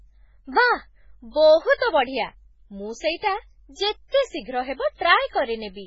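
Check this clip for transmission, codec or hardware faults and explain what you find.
One fault runs through the whole clip: the speech sounds watery and swirly, attacks are smeared, and nothing is left above 7.7 kHz. This is likely heavy MP3 compression, fitting a bitrate near 16 kbps, where the encoder cuts the treble and drops weak frequency lines that flicker between frames.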